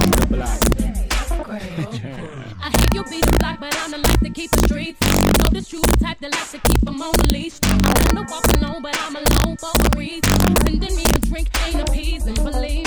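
Across the whole clip, the loudest moments break into violent, snapping cracks, far harsher and more abrupt than ordinary clipping. This is integer overflow: the signal was pushed about 4 dB past the largest value the integer format can hold, and instead of being limited there, those peaks wrapped around to the opposite extreme. Only around one percent of samples go over, but each one jumps across the full range, producing these sharp cracks.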